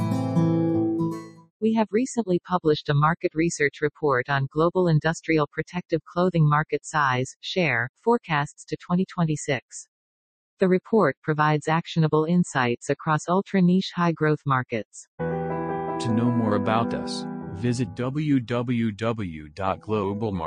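From the first second to the end, a speech-tuned noise suppressor is working on material it was not built for. It treats sustained, steady parts of the sound as noise, so the level keeps swinging by around 5 dB as it clamps down and lets go. The result is a pumping, fluttering thinness. On a waveform the envelope breathes unevenly, and on a spectrogram sustained bands fade and return while onsets stay bright.

Between 0.94 and 1.63 s the sound is cut by the noise suppressor far more heavily. For about half a second in that span it sinks by as much as about 18 dB and drops away as though pulled behind a curtain. At 19.43 to 19.58 s a shorter dip of about 9 dB lasts roughly 150 ms. Both appear as hollowed notches in the waveform envelope, with the spectrogram going pale there.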